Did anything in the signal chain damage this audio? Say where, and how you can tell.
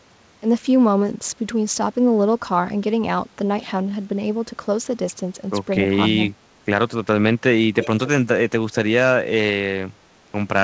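Yes. In the call processing stage, the far end's echo canceller likely let some loudspeaker pickup through. From 7.74 to 8.08 s, an echo leak places a faint copy of the speech about 232 ms behind itself, roughly 10 dB below the direct signal, before it cuts off.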